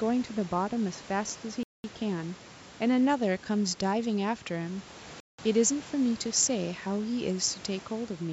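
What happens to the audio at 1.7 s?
At 1.63 s the sound cuts out completely and stays silent until 1.84 s, a gap of about 210 ms, before picking up again. This is most likely a Bluetooth stall: interference delayed the wireless packets, the headphones' buffer emptied, and playback paused until the resent data arrived. Unlike a dip in level or a muffled patch, the gap is true silence. Even the faint room noise, about 23 dB below the speech, drops out with it.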